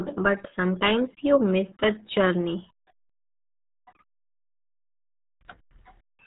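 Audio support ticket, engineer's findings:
RealAudio 14.4 codec damage, throughout the speech clip. Heavy gargly, muffled texture. Hard ceiling at 3.8 kHz, nothing above. Low-rate speech coder, consistent with about 8 kbit/s: coarse spectral modelling smears consonants. Unlike a plain low-pass filter, the band that remains is itself distorted, not merely dulled.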